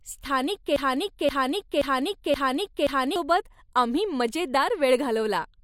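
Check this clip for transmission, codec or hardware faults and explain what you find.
One fault is audible. From 0.76 to 3.16 s, a 0.53 s piece of speech repeats five times back to back. This broken-record loop was likely caused by a stalled stream resending its last fragment.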